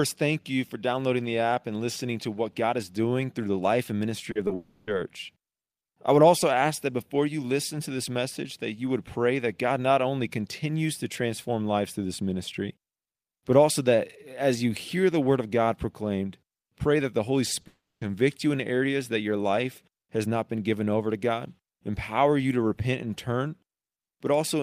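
At 4.31 s, a short concealed packet loss smears the speech for 40 ms. Another follows at 4.47 s, lasting 20 ms. In each, packets arrived too late, so the decoder stretched the last sound to fill the gap. Each sounds like a brief wobble.

From 4.55 to 4.89 s the sound turns into a fading buzz or hiss. This is likely a long network dropout. About 0.32 s of speech is missing and synthesised, with no silence. Speech then resumes past the lost part.

At 17.61 s, a third concealed loss gives a 20 ms smear.

From 17.67 to 18.03 s, a second likely long network dropout replaces 0.34 s. The buzz or hiss fades, and about 0.22 s of silence follows before the speech returns.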